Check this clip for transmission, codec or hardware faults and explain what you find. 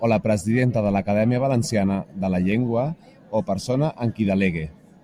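Three short, sharp clicks cut through the speech at 1.50 s, 2.52 s and 4.27 s, each a single tick with no gap, no muffling and nothing missing. These are dropped samples, likely a handful of samples skipped in the stream, a small fraction of a millisecond each. At each point the waveform jumps straight from one value to a later one, and that step is heard as the click, a thin vertical line across the spectrum.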